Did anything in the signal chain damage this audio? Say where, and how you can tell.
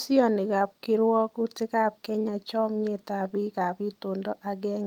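No, nothing in this speech recording stood out as damage from any stage of the chain on listening.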